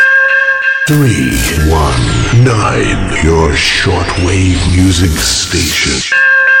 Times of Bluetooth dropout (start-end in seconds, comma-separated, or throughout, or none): none